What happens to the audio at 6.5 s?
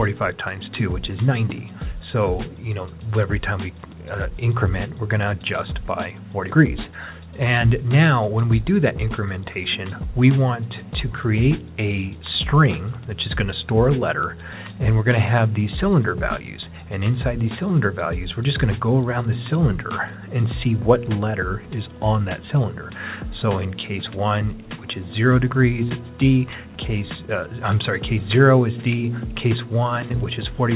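At 6.52 s there's a skip ahead: roughly 0.4 s of audio gets dropped, probably in transit or by an overflowing jitter buffer holding later packets, and playback lurches forward with no gap, the two sides butted straight together so the sound jumps abruptly.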